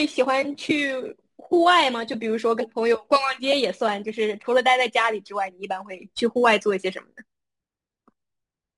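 Speech, with imaging from sample-and-hold upsampling for the whole clip. A metallic fizz rides on top of the speech. It rises and falls with the speech level. It sits at about 22 dB below the signal. The fizz occupies a band from 11.025 kHz to 22.05 kHz, which fits an original rate near 22 kHz raised to 48 kHz. Each sample was simply repeated, with no smoothing filter. So a mirrored copy of the spectrum folds up above the old band edge.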